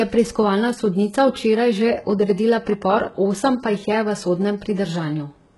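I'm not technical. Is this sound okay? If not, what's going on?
No. Heavy HE-AAC compression runs throughout the speech and is the likely cause of the trouble. It keeps only the lower frequencies and fakes the treble by copying them upward, so s sounds turn gritty or lispy, and nothing remains above 11.5 kHz.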